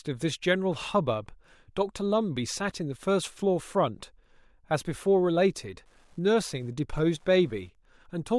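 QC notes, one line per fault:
5.64–8.39 s, Wi-Fi interference: from 5.64 s to the end, a faint, steady ticking sits under the speech at just under ten clicks a second. That's a nearby Wi-Fi radio's beacon, sent every 102.4 ms, getting picked up and rectified by the audio circuitry, so each transmission turns into a little click. It's quiet, well below the speech, so you'll catch it most easily in the gaps between phrases.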